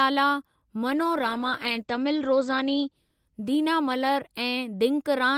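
A call bitrate drop hits this speech clip from 0.89 to 5.17 s. The encoder's rate falls, consistent with 48 to 12 kbps, and the top end narrows from 20 kHz to 8 kHz, leaving the sound coarse and muffled, worst for 1.47 s.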